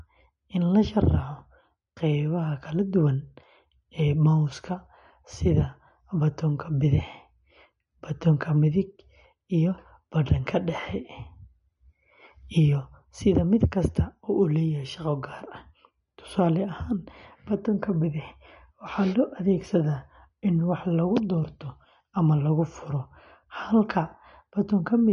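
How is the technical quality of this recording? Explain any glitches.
The recording has audible lossy-compression damage throughout. Across the whole clip the speech has a watery, swirling edge, and s sounds chirp metallically. The likely cause is MP3 compression at a low bitrate, around 40 kbps. Starved of bits, the encoder discards treble above 10.6 kHz and zeroes weak frequency lines that switch on and off between frames. A spectrogram would show a flat ceiling at 10.6 kHz, with flickering holes speckling the upper bands beneath it.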